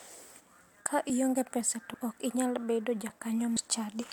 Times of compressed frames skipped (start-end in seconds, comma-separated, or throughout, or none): 1.93, 3.55